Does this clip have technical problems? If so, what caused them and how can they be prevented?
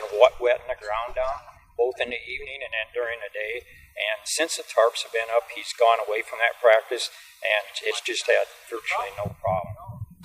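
Yes. At 4.25 s, compressed frames are skipped. Whole frames of the encoded audio never reach the output, either because they are missing from the file or because the decoder rejected them as damaged. The sound jumps ahead by roughly 70 ms where the surviving frames meet. To prevent it, verify file integrity after transfer or storage and use a container with error checking, so damaged frames are caught and replaced from a good copy.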